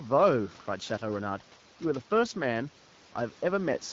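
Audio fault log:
Nothing stood out on listening to this speech clip; the faint room noise sits about 26 dB below the voice, and the AMR wideband (HD Voice) codec keeps its light coding texture.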